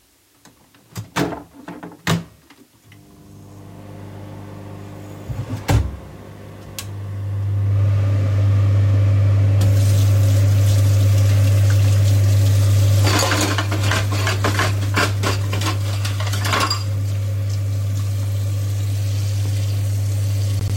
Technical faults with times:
none

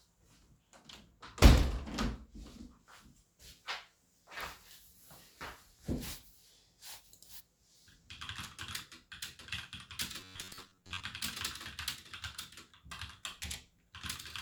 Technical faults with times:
10.20-11.03 robotic sound from repeated short buffers

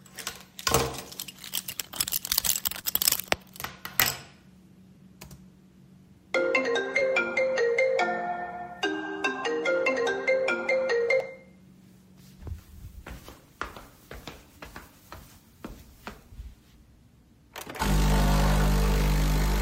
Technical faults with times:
2.81-2.85 short concealed packet loss
6.99-7.03 short concealed packet loss

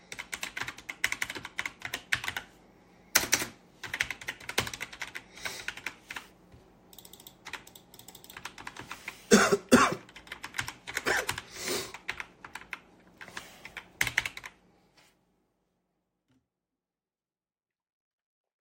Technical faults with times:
none

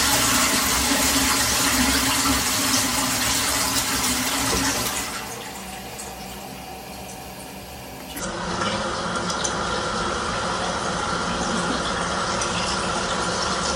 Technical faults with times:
8.19-13.75 section at the wrong speed

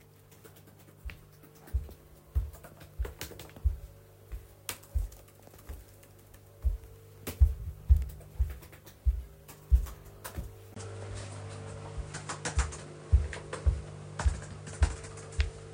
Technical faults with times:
10.74-15.73 input switched to a poorer device

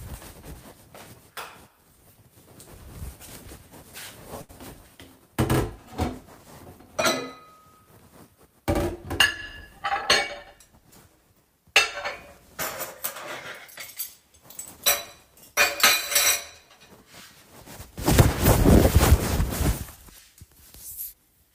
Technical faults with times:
4.41-4.51 short stall from a late packet
10.58-11.18 jitter buffer speed-up

